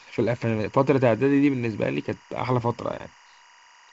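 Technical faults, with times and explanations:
Throughout, timecode bleed: a faint warbling chirp flipping between 1 and 2 kHz, about 30 dB under the speech, as linear timecode leaks in.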